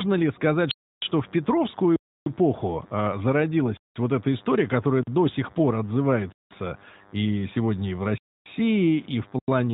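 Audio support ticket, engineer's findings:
Block of digital silence, four dropouts: 0.71–1.02 s (311 ms), 1.96–2.26 s (302 ms), 8.18–8.46 s (279 ms), 9.39–9.48 s (93 ms). Hard cut to silence with no fade. The last gap fits a 4096-sample buffer, so output buffer underrun is the probable cause. Waveform shows flat silent runs with square edges; spectrogram shows empty vertical slabs.

Lost AMR speech frames, 1.72–1.75 s, one 20 ms frame. Brief dip and warble where the decoder concealed a frame that failed its checksum on the radio link, repeating the previous pitch and vocal tract settings at reduced gain. Spectrogram shows a short smeared, lower-energy patch with steady harmonics. Band-limiting at 4 kHz from the AMR narrowband mobile codec at 12.2 kbps is audible throughout.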